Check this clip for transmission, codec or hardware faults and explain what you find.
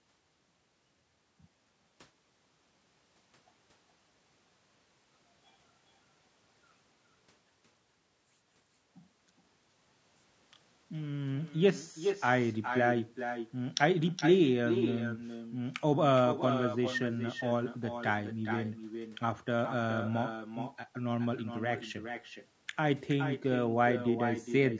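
Two faults run through the entire speech recording, start to finish.

Echo with no canceller, throughout. The far end plays the call over a loudspeaker, its microphone picks that sound up, and nothing removes it. Every phrase therefore comes back roughly 0.4 s later, about 9 dB quieter, as a thinner shadow.

Low-delay AAC compression, throughout. The voice sounds rough and grainy, with noise filling the spaces between its harmonics. The likely cause is AAC-ELD, whose short frames resolve pitch poorly. The damage is plainly audible and fits a low bitrate around 32 kbps, and the band stops at 8 kHz.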